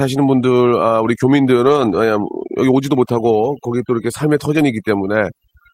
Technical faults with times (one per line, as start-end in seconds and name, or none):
0.00-5.74 overdone noise removal
1.65-1.95 lost packet rebuilt from error correction
4.57-4.63 lost packet rebuilt from error correction